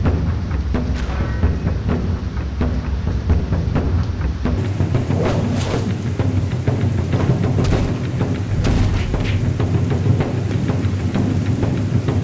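For the first 4.58 s or so the audio has a wrong sample rate problem: everything runs at about two-thirds speed and sits roughly 7 semitones low, sluggish and dark, which fits 24 kHz material being played back at 16 kHz without conversion.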